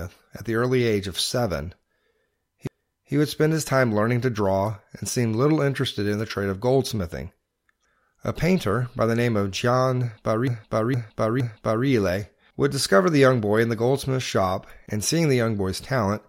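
Repeated frames: a 0.46 s block of compressed audio replays once at 2.67–3.14 s, before "would spend his time", and three times at 10.47–11.87 s. It stutters, and the waveform shows identical copied segments.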